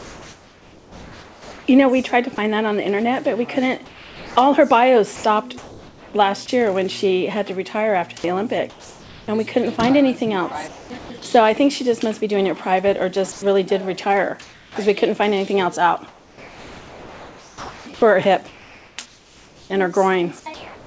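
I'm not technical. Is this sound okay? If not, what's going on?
No. There are three related problems, all coming from how the call system handles quiet moments.

Comfort noise in place of the background, from 0.0 to 1.68 s, 3.86 to 6.14 s and 8.70 to 11.10 s. In these quieter stretches, the real background gives way to a smooth, even hiss that lacks the texture of a real room and is a little quieter at the start. The likely cause is that the sending end paused transmission because it judged nothing important was happening, and the receiving end filled the gap with artificial noise.

Sound dropped by the voice detector, from 5.16 to 5.24 s and from 10.98 to 11.10 s. In each spot, a short piece of real sound vanishes and plain hiss takes its place, up to about a tenth of a second. This was likely a quiet bit of sound that the sending side wrongly treated as background, so it stopped sending until louder sound returned.

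Sound chopped by the voice detector, from 13.32 s to the end of the clip. Here the problem repeats. Soft parts of the sound keep getting swapped for hiss and then returning, so the audio sounds broken up. The sending side was likely switching transmission on and off repeatedly across this whole stretch.

The call link also removes everything above about 8 kHz, which dulls the top end.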